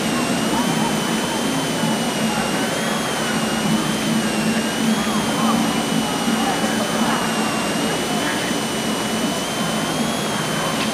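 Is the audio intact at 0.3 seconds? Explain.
No, a switching supply whistle runs through the whole clip: a high tone drifting between 2.74 and 3.33 kHz, roughly 10 dB under the sound, from a supply in audible burst mode or beating with another supply.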